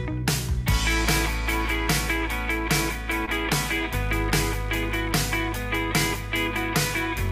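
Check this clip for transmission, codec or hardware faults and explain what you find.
One transmission fault is present. Short concealed packet loss at 3.25 to 3.29 s: about 20 ms of audio arrived too late, and the receiver extended the preceding sound, heard as a brief smear.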